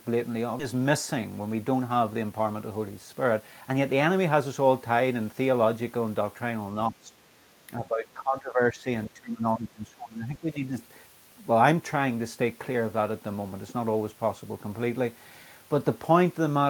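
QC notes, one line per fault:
0.59–0.61 s, skip ahead. The speech jumps forward with no fill, and about a second of audio is gone. The receiver dropped a stretch while later audio was already queued, so the two sides of the cut are joined almost directly.
0.73–3.94 s, jitter buffer speed-up. Speech runs at 108% speed at unchanged pitch and sounds hurried. The buffer held more audio than its target, so it trimmed many short pitch-period pieces in a row. Roughly a third of a second was removed.
6.90–7.14 s, 7.68–8.87 s and 9.07–10.75 s, speech suppressed in double talk. The talker dips. The deepest drops are about 10, 15 and 20 dB. The likely cause is an echo canceller confusing the talker with loudspeaker echo while both sides spoke.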